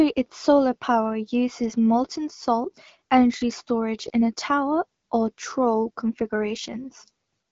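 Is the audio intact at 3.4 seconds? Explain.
Yes, the audio is intact at 3.4 seconds, with no fault at that moment.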